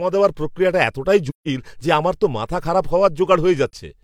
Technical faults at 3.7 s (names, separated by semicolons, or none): AAC frame loss with muting